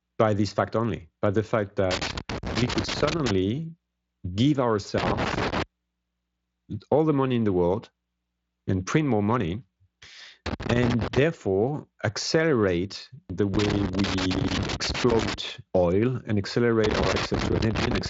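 Loose connector crackle bursts in at 1.91–3.31 s after "only by the fact", 4.98–5.63 s, 10.46–11.18 s, 13.54–15.34 s after "accelerate the" and before "oil and", and 16.84–18.06 s after "oil and". A worn contact making and breaking chops the signal into irregular scratching. On a spectrogram this shows as ragged broadband vertical streaks. The waveform shows sudden dropouts and spikes.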